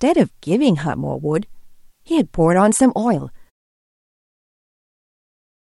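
Nothing goes wrong here: the speech is free of technical faults, and the smooth fade out near 3.5 s is just a tidy editing touch.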